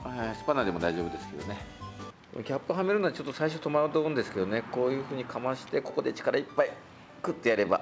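No technical faults are audible.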